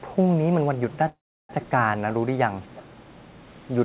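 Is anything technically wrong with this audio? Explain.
Yes, there are two kinds of fault, heard over a narrowband call path with nothing above 4 kHz, which fits G.711 mu-law at 64 kbps.

From 1.08 to 1.51 s there is a call audio freeze. Packets were likely held up and the jitter buffer ran empty, so 412 ms had to be filled. The last sound trails off into about 350 ms of silence, then the audio resumes where it stopped, delayed rather than missing.

At 1.62–1.66 s and 2.75–2.82 s there is an echo leak. A far-end echo canceller likely let loudspeaker pickup through, so a copy of the speech comes back 362 ms late. These are faint, brief scraps well below the main speech.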